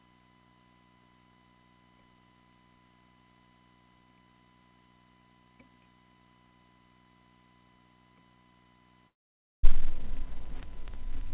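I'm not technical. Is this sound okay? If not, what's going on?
No. From 9.08 to 9.65 s the sound fades into a brief buzz, then silence, and comes back with a bit missing, likely a long network dropout.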